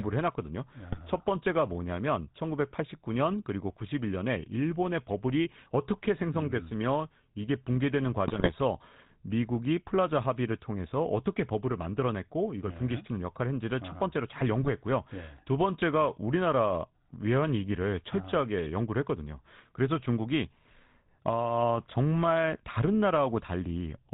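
GSM full-rate codec damage runs through the whole of this speech recording, plainly audible and consistent with the 13 kbps full-rate coder. The voice is rebuilt from a vocal-tract model excited by a sparse pulse train, which gives it a buzzy, gravelly edge, and nothing above 4 kHz survives. GSM bit errors break in at 0.91–1.01 s, 8.26–8.54 s and 14.62–14.69 s. Each burst sounds like a weak radio link corrupting the decoder's filter, pitch and gain values, so frames come out with a warped spectrum or a sudden level jump, heard as squawks, pops and gargling. The longest is the one near 8.3 s.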